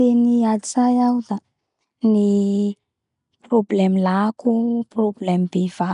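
Throughout, the speech carries a rough, hissy halo and a smeared, underwater texture, with nothing above 10.6 kHz, likely from Nellymoser compression filling starved bands with noise.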